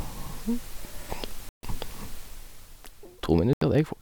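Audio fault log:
1.49–1.63 s and 3.53–3.62 s, Bluetooth dropout: the speech falls to silence twice, for about 142 ms and then about 81 ms, and each time resumes further along, as if it had kept running through the gap. The likely cause is the wireless link failing to deliver audio packets to the headphones in time, so the receiver dropped them and output nothing. The gap lengths fit roughly seven and four lost packets.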